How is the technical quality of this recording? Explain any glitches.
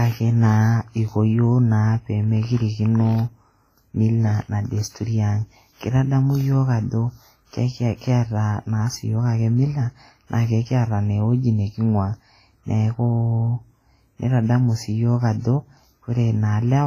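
Heavy codec damage runs through the whole speech clip, and it sounds like WMA compression, likely from an encode somewhere around 24 kbps. A transform codec like this chops the signal into long blocks and coarsely quantises each one. Here that means quiet detail gets dropped, and the leftover noise smears in time around each sound. You hear a ringing, washy quality with hiss that swells and fades with the speech, and there's nothing at all above 15.2 kHz.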